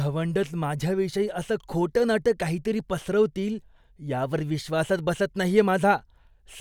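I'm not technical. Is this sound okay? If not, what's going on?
Yes, nothing here points to a technical fault in the recording.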